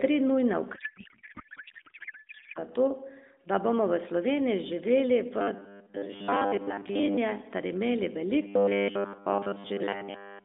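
Codec payload misread, 0.76 to 2.59 s: octet-aligned AMR frames are unpacked as bandwidth-efficient, so the speech becomes garbled noise and warble barely tracking it.

Robotic sound from repeated short buffers, 5.39 to 7.18 s and 8.42 to 10.44 s: a rigid, metallic 100 Hz buzz, likely from a 10 ms chunk looping while most real audio is skipped.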